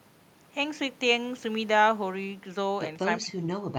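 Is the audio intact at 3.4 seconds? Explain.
No, 3.4 s falls inside a stretch of speech suppressed in double talk, running from 3.04 to 3.48 s. The speech dips by around 15 dB, likely because an echo canceller mistook overlapping talk for echo and pulled everything down.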